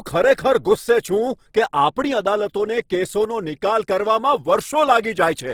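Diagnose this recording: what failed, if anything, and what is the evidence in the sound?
The failure sits at the codec stage: the speech has most likely passed through Opus compression in its music-oriented CELT mode, at a rate the damage suggests is around 16 kbps. Throughout the clip the damage is plainly audible. Bands starved of bits are filled with folded or noise-like content rather than left empty, so the voice turns rough and grainy instead of swirling. The encoder kept full bandwidth, with content reaching up to about 20.2 kHz.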